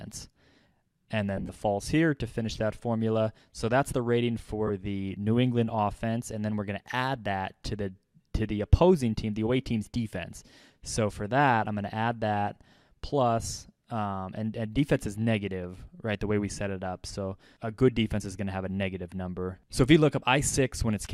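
Lost LE Audio frames at 1.37–1.49 s, 4.67–4.70 s and 13.43–13.45 s: the LC3 decoder covered the gaps by repeating the last spectrum with random signs, so tones smear into noise. The first event scatters about 82.5 ms of loss over 120 ms, with runs up to roughly 40 ms.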